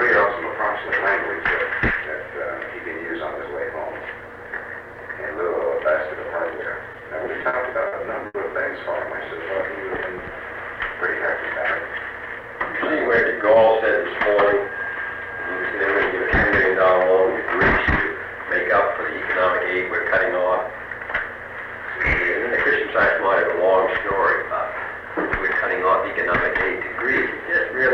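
The audio shows two timing faults from a jittery network path. From 6.93 to 8.36 s there are repeated stalls (stutter): the jitter buffer ran dry ten times, and the receiver bridged each gap by continuing the last sound, 250 ms in all, with the longest hold about 80 ms and concealment covering 17% of that stretch. Nothing is lost, but the sound drags and hiccups. A spectrogram shows short smeared, static patches where partials freeze instead of evolving, and the longer ones fade in level on the waveform. From 11.85 to 12.43 s comes a jitter buffer speed-up. The buffer had built up surplus audio and trimmed roughly 50 ms by repeatedly cutting out pitch-period-length pieces, so playback runs at 108% speed with unchanged pitch and sounds hurried. On a spectrogram harmonics stay at the same frequencies while events arrive compressed in time, and the waveform shows cycles of unchanged spacing with tiny splice points.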